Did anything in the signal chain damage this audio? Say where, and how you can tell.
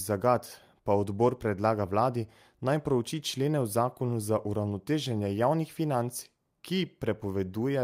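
No, nothing along the chain has left a mark on this speech that I can hear, so there's no stage to point to.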